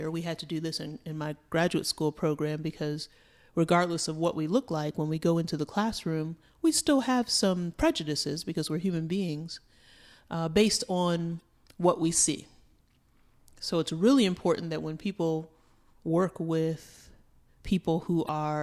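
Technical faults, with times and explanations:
11.38–11.42 s (between "uh based on" and "what we see") and 18.25–18.29 s, damaged data in a compressed stream: corrupted bytes make the decoder misread frames and hunt for sync, producing a brief glitch.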